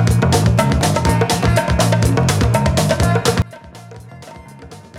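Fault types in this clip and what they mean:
Sudden gain jump: At 3.42 s the level drops by about 22 dB in a single step, with no fade, and stays down to the end. The sound and its background noise fall together. A digital gain setting applied without a ramp is the likely cause.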